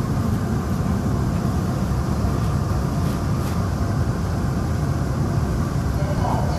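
At 1.37 s and again at 6.18 s, brief blips mark damaged data in a compressed stream. Corrupted bytes make the decoder misread frames and lose sync momentarily.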